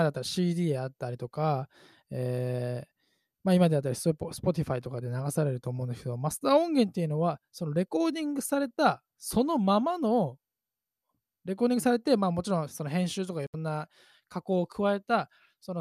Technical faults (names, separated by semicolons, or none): digital broadcast dropout